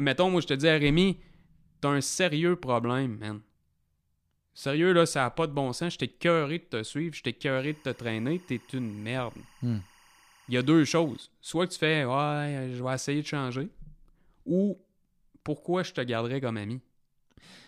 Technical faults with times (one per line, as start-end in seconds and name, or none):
7.57-11.21 timecode bleed